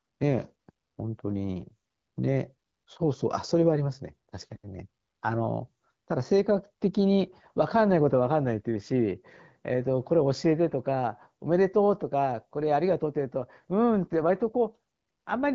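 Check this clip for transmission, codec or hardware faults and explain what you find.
No transmission, codec or hardware fault can be heard in this speech clip. It has the band-limited character of AMR wideband (HD Voice) coding at 12.65 kbit/s, with speech carried up to about 7 kHz and only light coding texture.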